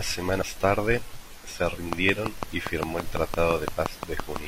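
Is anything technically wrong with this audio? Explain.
Yes. This speech clip has two kinds of fault.

Damaged data in a compressed stream shows up twice: from 0.38 to 0.44 s, just before "tarde se", and from 2.47 to 2.51 s. Corrupt bytes make the decoder misread frames and lose sync until the next frame header. Each spot is a brief glitch.

A train of clicks runs from 1.93 to 4.37 s, starting after "tarde se". About fifteen similar clicks arrive evenly, 5.93 per second, and they peak at about 20 dB above the speech. They tick through pauses too. The likely cause is interference or a faulty connection.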